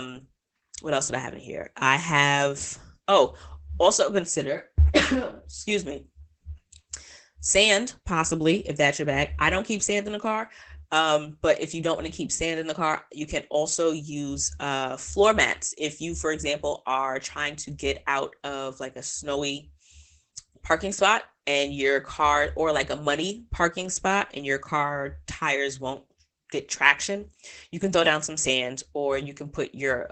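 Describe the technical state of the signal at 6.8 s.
At 6.8 s the speech sounds muffled and hoarse, with plainly audible Opus voice compression damage throughout the clip. Nothing reaches above 8.9 kHz, and the coarse, linear-prediction-coded excitation points to SILK wideband mode at around 12 kbps.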